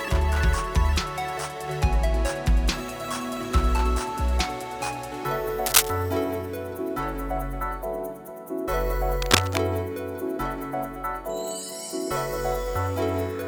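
A worn cable or connector being moved, likely, makes its contact resistance jump about, causing cable scratch noise: from 5.66 to 5.90 s a scratchy burst sits somewhat above the sound, and from 9.20 to 9.58 s a rustling one at roughly equal level.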